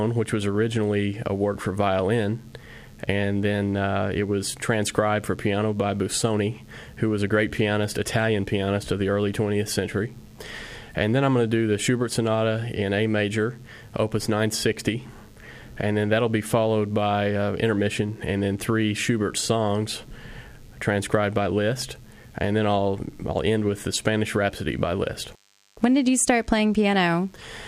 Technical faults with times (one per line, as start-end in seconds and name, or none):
0.00-27.67 DECT cordless phone buzz